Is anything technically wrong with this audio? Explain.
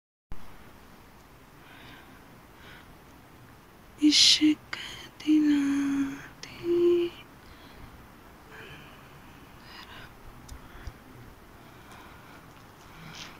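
No, nothing technically wrong can be heard here.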